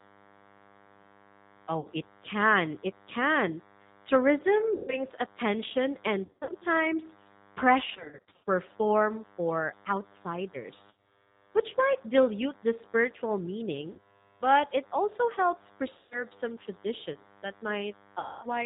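From the start, a thin, steady DECT cordless phone buzz sits underneath the speech, about 30 dB down. It's a 100 Hz tone with lots of harmonics, from a nearby handset or base whose 10 ms radio bursts are getting rectified in the audio circuit.

Also throughout, the G.729 codec is plainly audible. Everything above 4 kHz is gone, and the speech comes across slightly rough and synthetic. That's what you get at 8 kbit/s when the voice is rebuilt from a filter, a pitch predictor and a few pulses per frame.

Then there's VoIP packet loss concealed by the speech codec, at 1.80–1.89 s just before "it can", 4.75–5.00 s, 6.25–6.53 s, 7.90–8.47 s, 10.91–11.26 s just before "which might dilute the", 13.93–14.27 s, 15.98–16.24 s between "but it also helps" and "some traditions that", and 18.19–18.47 s. Each time the decoder stretches the last sound into a fading buzzy tone or coloured noise. The voice stays weak for a moment afterwards. 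The 6.25 s and 7.90 s stretches are choppier, with gaps scattered through them.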